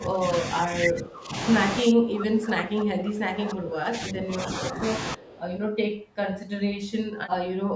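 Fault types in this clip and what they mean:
Speech suppressed in double talk: the voice keeps ducking, up to around 20 dB, through the first 4.8 s, likely the echo canceller clamping down during overlap.
Echo leak: a faint copy of the voice comes back 307 ms late around 5.2 to 5.4 s, likely loudspeaker pickup the canceller missed.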